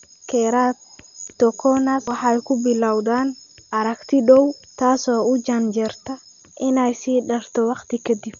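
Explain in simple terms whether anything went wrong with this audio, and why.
Something did go wrong, for the whole recording. The speech sounds dull and muffled, with nothing above about 6.9 kHz. A rough, fluttering hiss clings to it. This heavy damage is likely Dolby Digital compression, squeezed too hard, so missing detail gets filled with noise.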